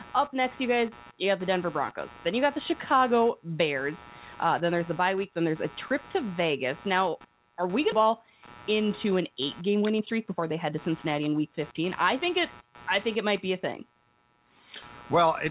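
A speech recording with computer activity noise running through it. A buzz pulses at around 100 times per second, roughly 25 dB below the speech. It follows the machine's own load on the shared audio ground, not the talking. At 7.92 to 7.94 s, right after "are we going", playback skips ahead. About a second of audio is gone, and the two sides are butted together with no gap. Next comes jitter buffer speed-up. From 8.01 to 8.31 s the speech runs about 12% fast, and from 8.72 to 11.43 s about 11% fast. The pitch stays the same while short pitch-period pieces are cut out, trimming roughly 50 ms and then around 300 ms of backlog. The speech sounds hurried. The call path caps the band at 4 kHz, which fits G.711 mu-law at 64 kbps.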